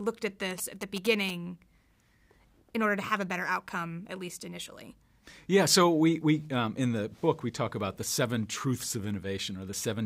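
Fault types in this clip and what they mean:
GSM signalling bursts: a nearby 2G phone's radio bursts get rectified into the audio, giving a galloping dit-dit-dit of short buzzes at about 217 Hz, about 10 dB below the signal, from 0.51 to 1.31 s.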